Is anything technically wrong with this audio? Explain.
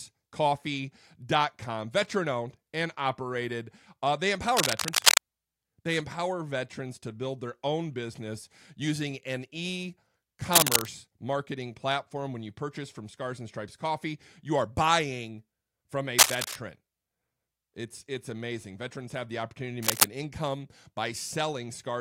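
Yes. Cable scratch noise appears four times: 4.57 to 5.18 s; 10.52 to 10.85 s, between "business using an e" and "marketing platform"; 16.18 to 16.56 s, after "are buying from a"; and 19.83 to 20.06 s, after "have the opportunity to". Each is a dense, uneven rustle over the speech, the first three about 10 dB louder than it, and softer in the last burst, about 5 dB louder. The likely cause is a worn cable or connector being moved, so its contact resistance jumps rapidly.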